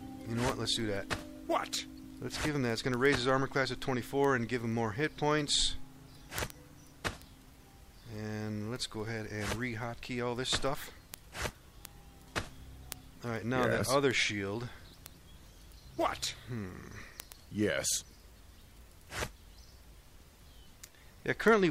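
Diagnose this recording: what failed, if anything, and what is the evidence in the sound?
Word clock ticks on the digital link: the receiver isn't locked to the sender's clock. Ticks run from 0.2 s to 21.6 s, about ten a second. The clocks drift a couple of hundred ppm apart, so one sample slips at each tick.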